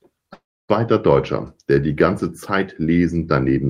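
Speech clip with a long network dropout from 0.33 to 0.71 s: sound fades into a hiss, then goes silent for about 0.29 s. Unlike brief packet loss, concealment gives up, likely from lost network audio.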